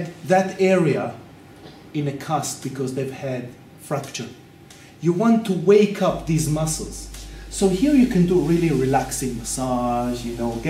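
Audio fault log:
6.08–10.69 s, mains hum: a steady low tone at 50 Hz enters at 6.08 s and runs to the end of the clip, sitting roughly 20 dB below the sound it accompanies. The power line has coupled into the signal path, through either a ground loop or a nearby transformer. The mains frequency bleeds in as a constant drone that doesn't follow the audio's own dynamics.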